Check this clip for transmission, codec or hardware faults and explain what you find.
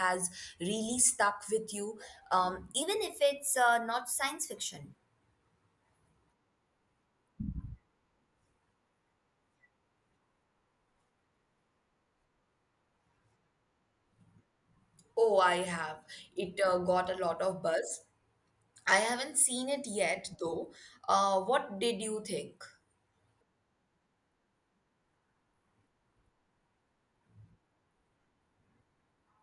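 One fault is present, a wrong sample rate, from 2.82 to 4.96 s, just after "stuck with you um". The samples are played faster than recorded, with no conversion, which fits 22 kHz audio clocked out at 24 kHz. Speech runs 1.09 times faster and about 1.5 semitones higher, sounding slightly hurried and higher.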